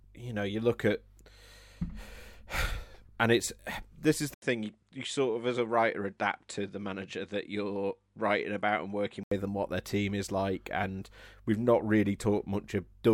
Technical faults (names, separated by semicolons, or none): input switched to a poorer device